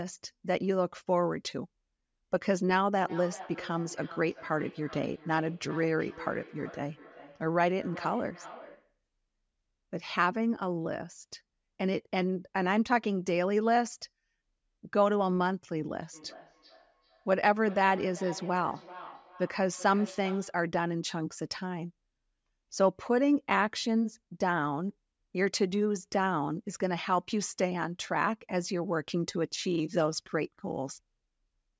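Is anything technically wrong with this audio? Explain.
Yes. From 3.05 to 8.98 s and again from 16.13 to 20.66 s there is feedback echo between two devices. One device's microphone picks up the other's playback, which its canceller can't remove, so the speech returns roughly every 0.4 s, peaking about 18 dB below the speech. The spectrogram shows each syllable as fainter, evenly spaced copies.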